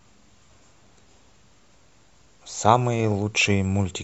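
A short speech recording with no technical faults audible anywhere in the signal.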